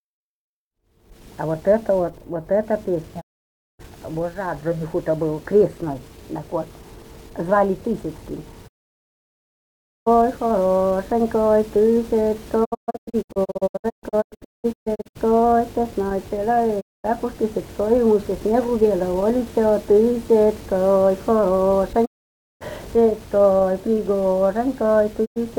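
Digital broadcast dropout: the receiver mutes on failed frames, fading to clean silence within 20 ms rather than hissing like analogue loss, at 3.2–3.81, 8.67–10.08, 12.64–15.17 (scattered short holes), 16.8–17.06, 22.04–22.63 and 25.24–25.38 s.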